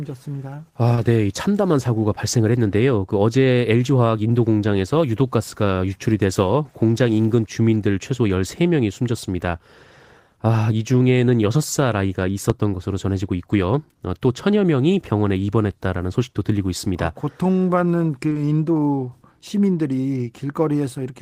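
At 0.95 s a short concealed packet loss leaves a brief smear in the speech. About 20 ms of audio never arrived in time. The receiver filled the gap by extending the last sound, then blended back into the real signal.

At 12.50 s a single loud pop lands on top of the speech, which carries on underneath. It lasts about 30 ms and peaks roughly 15 dB above the signal. A sudden voltage step, likely from a plug, switch or static discharge, caused it.

At 18.29 s and again at 18.33 s, two more concealed losses follow back to back. Each covers about 20 ms of missing audio. Together they make a longer wobble lasting about 80 ms.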